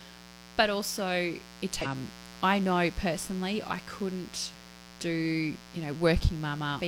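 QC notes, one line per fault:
Throughout: mains buzz, a raspy 60 Hz hum with spiky harmonics climbing into the kilohertz range, sitting roughly 20 dB under the speech all along.
1.81 to 1.87 s: damaged data in a compressed stream, a short glitch between "also it" and "I know personally I" as the decoder loses sync and hunts for the next frame.
4.50 s: damaged data in a compressed stream, a quick glitch right after "know personally I couldn't", where a corrupted frame gets misread before the decoder locks back on.
6.76 to 6.81 s: damaged data in a compressed stream, another glitch near the end where bad bytes knock the decoder off its frames briefly.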